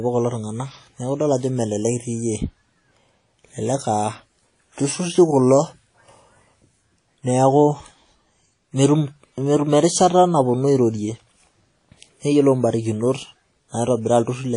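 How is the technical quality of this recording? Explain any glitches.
The speech is marred by plainly audible codec damage across the whole recording. The likely cause is WMA compression: long transform blocks smear quantisation noise into a ringing, washy hiss that breathes with the speech, and nothing sounds above about 10.1 kHz. Unlike a plain low-pass filter, the smearing points to a low bitrate near 32 kbps.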